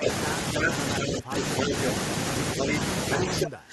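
Right from the start, 0.0 to 1.73 s, the speech keeps ducking. It dips by something like 20 dB at its deepest, for about 700 ms in total. That's speech suppressed in double talk. It's most likely the echo canceller getting confused with both ends talking at once and clamping down on everything. From 0.03 to 1.92 s there's also an echo leak. A copy of the voice trails about 300 ms behind, and it's about 5 dB louder than the direct speech. That's likely the far end's loudspeaker bleeding into its mic and the canceller failing to scrub it out.

The pattern repeats later. From 2.58 to 3.47 s a second echo leak shows up, delayed by about 306 ms and sitting roughly level with the speech. Again this is likely leftover loudspeaker pickup being sent back down the line. Overlapping it, from 2.6 s to the end of the clip, the speech is suppressed in double talk again. This time the dips run even deeper, around 25 dB. 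The likely cause is the canceller treating the near talker as echo and ducking both.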